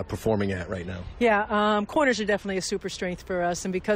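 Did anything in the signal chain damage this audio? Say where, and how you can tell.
Yes. An adaptive stream starting at a low bitrate: the player began on a lean rendition before measuring the network. From 0 to 2.5 s the treble is thin, with nothing above 14.1 kHz, and codec artefacts are stronger, suggesting roughly 32 kbit/s AAC. It then jumps without a gap to fuller sound, which fits 96 kbit/s.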